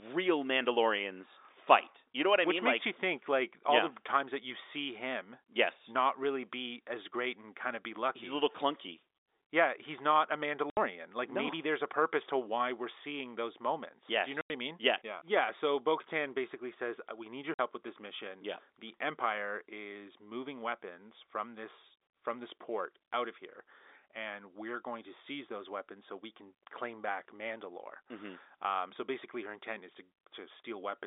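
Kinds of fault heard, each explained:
Packet loss filled with silence: chunks of the stream never arrived, and the receiver simply played nothing in their place, so the speech drops out with abrupt, hard edges. It happens three times: about 70 ms right after "he's not a", 90 ms between "you know" and "I mean", and 50 ms between "need your" and "with this mission". All gaps are multiples of 10 ms, which fits 10 ms packets on the narrowband telephone-coded line.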